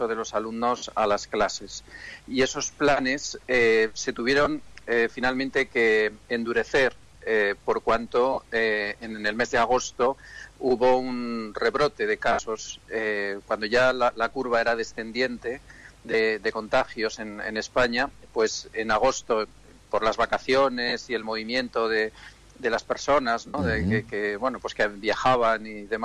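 Brief noisy smears replace the audio at 0.77 s (about 52 ms), 4.44 s, 8.33 s, 12.32 s (about 68 ms), 16.11 s, 18.07 s (short gaps scattered over 60 ms), 20.88 s and 23.47 s (about 68 ms). These are lost LE Audio frames: the LC3 decoder filled each gap by repeating the last spectrum with random signs, and the gap lengths fit 7.5 ms frames. Light lossy compression is also present and can be heard only faintly.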